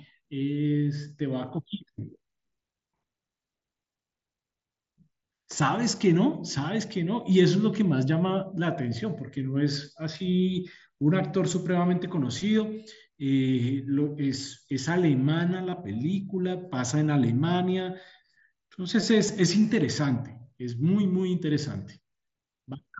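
Concealed Bluetooth headset packet loss occurs at 15.70 to 15.73 s and again at 19.28 s. Audio packets from the headset never reached the phone, so the receiver patched each gap by repeating the closest-matching piece of the preceding waveform. The first gap lasts about 22.5 ms, which fits three consecutive lost frames, and carries a short buzzy hold with a slight warble as live audio resumes. The second covers only 7.5 ms and is barely audible within the wideband mSBC headset stream.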